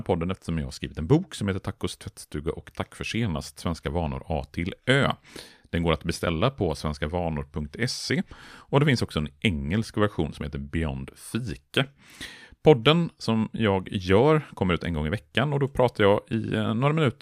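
No technical faults can be heard anywhere in the recording. There is nothing in the audio that needs a time mark or further description.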